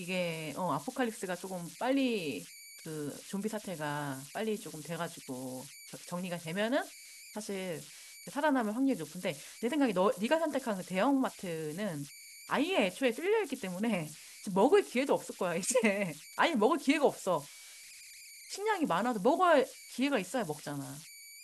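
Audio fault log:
throughout, converter idle tones: a tone around 2 kHz sits about 18 dB under the speech, as an undithered delta-sigma converter falls into repeating bit patterns.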